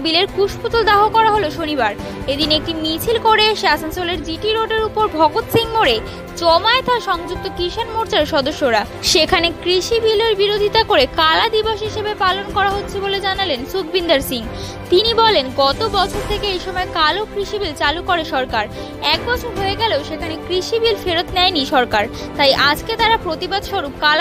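Nothing in the clip stands out as a technical fault, so there's no problem to point to at any moment.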